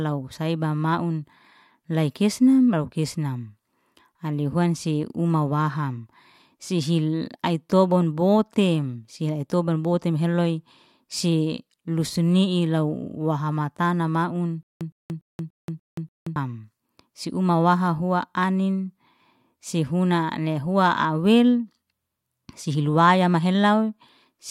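A speech clip with a stutter with silent gaps from 14.63 to 16.36 s. A fragment about 112 ms long plays six times, each followed by roughly 179 ms of dead digital silence, so the burst returns every 291 ms at a steady rhythm. The likely cause is a stalled player or stream replaying its last buffered fragment at each retry. Unlike a plain dropout, the same sound repeats, and unlike a seamless loop, each repeat is followed by silence.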